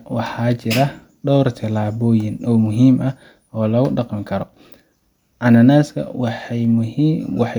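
At 2.66, 3.54 and 6.65 s the speech carries sharp clicks, likely dropped samples: a few samples vanish, so the waveform jumps abruptly, drawing a thin vertical spectrogram line.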